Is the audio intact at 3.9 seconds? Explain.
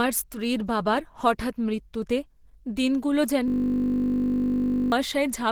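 No. At 3.9 seconds the sound is caught in a system hang loop that runs from 3.48 to 4.92 s. The machine or its driver stalled while the audio hardware kept replaying the same stretch of its ring buffer. A 20 ms slice repeats exactly, over and over, at 50 Hz, so instead of the speech there is a steady, pitched 50 Hz buzz, and about a second and a half of real audio is lost. Because the loop is this short, it fuses into a drone rather than the machine-gun stutter a longer buffer would give, and it is not silence, which is what sets it apart from a plain dropout. The 20 ms period fits a buffer of that length.

Under that, and across the whole clip, there is plainly audible coding damage, likely from Opus compression at a low rate around 16 kbps in its hybrid mode. The speech has a muffled, hoarse, grainy roughness, not the swirling, holey texture of MP3. The band still reaches about 20.3 kHz, so the damage here is the rough, hoarse grain rather than a narrowed bandwidth.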